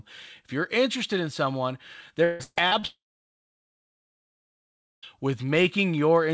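Speech clip carried over a call path with nothing above 8 kHz, which fits a wideband codec such as G.722. From 2.24 to 2.86 s, just after "you're interested in someone", repeated packet loss (robotic sound) leaves choppy fragments: about half the span is patched from earlier audio, and the longest gap is 156 ms. From 2.87 to 5.05 s a brief fading fill gives way to roughly two seconds of silence before the audio resumes with that stretch missing, most likely a long network dropout.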